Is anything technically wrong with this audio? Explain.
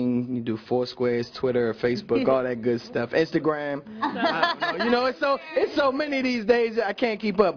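No, nothing here sounds technically wrong, and there's no audible problem worth flagging.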